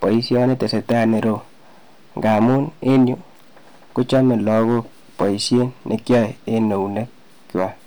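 From start to finish the speech carries hard clipping. The signal is driven about 8 dB past what one stage can pass, so every peak is sheared flat, and a few percent of the waveform sits pinned at the ceiling. Those square tops throw harmonics high into the spectrum, heard as a gritty crackle on each louder syllable. Unlike gentle saturation, which rounds peaks and warms the sound, the distortion here appears abruptly on peaks and sounds harsh.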